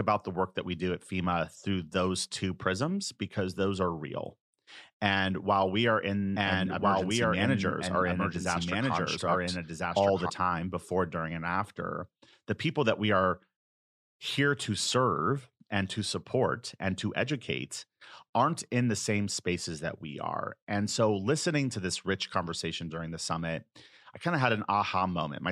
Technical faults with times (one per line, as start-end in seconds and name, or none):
6.36-10.30 doubled audio track